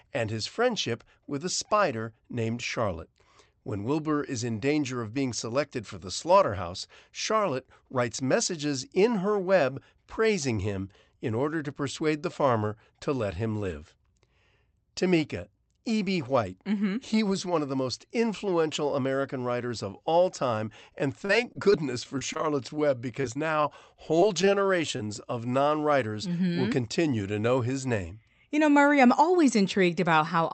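Repeated packet loss (robotic sound) hits from 21.25 to 22.41 s, just after "of all time and", and again from 23.14 to 24.49 s. Holes of up to 35 ms are patched by extending the previous sound, leaving choppy speech with pieces missing. Short concealed packet loss follows at about 24.97 s, right before "of non writers": roughly 20 ms went missing and was bridged, heard as a brief smear.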